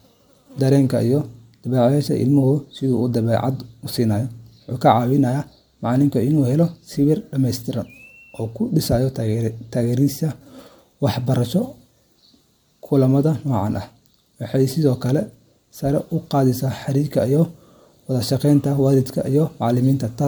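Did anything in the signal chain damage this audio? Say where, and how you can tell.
Yes, at the codec stage, throughout the speech: generation loss. The sound is swirly, hollow and smeared, with blurred attacks, more than a single encode around 130 kbit/s would give. Likely cause: roughly seven MP3 passes, each requantising on a shifted frame grid.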